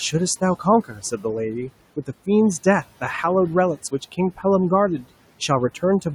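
Noise suppressor artifacts run through the whole clip. The suppressor estimates which frequency bands hold only steady background and pulls them down frame by frame, here by about 18 dB. The room noise, which sits about 18 dB below the speech, drops away in the gaps and comes back up underneath the speech, so the background seems to breathe in and out with each phrase instead of staying constant.

Speech cut by the noise suppressor occurs from 0.84 to 1.25 s. Within that stretch the suppressor mistook part of the speech for noise and turned it down along with the background, by as much as about 13 dB at the deepest point. Around a third of a second of sound is affected, and the quieter parts come out faint and swallowed, as if they had been dipped under the noise floor.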